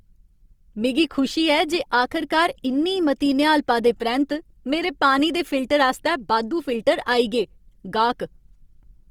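The speech running through the whole clip has most likely passed through a low-rate Opus encoder in its music mode, starved of bits at a rate that fits roughly 24 kbps. Short of bits, the encoder has kept each band's energy but filled in detail with folded or noise-like content, so the voice sounds rough, grainy and plainly coded rather than hollow or swirly. The bandwidth has stayed full, with content reaching about 20.3 kHz.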